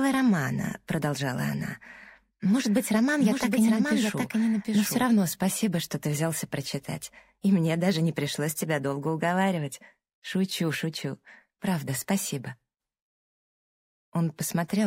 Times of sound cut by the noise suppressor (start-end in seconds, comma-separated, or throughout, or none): none